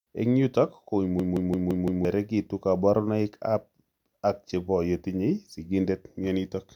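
At 1.20 to 2.05 s, a system hang loop. The frozen system replays one 171 ms buffer five times, a 5.9 Hz stutter. About a second of speech is lost.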